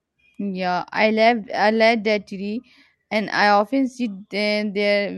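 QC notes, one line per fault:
No fault, so the QC notes for this speech clip need no lines.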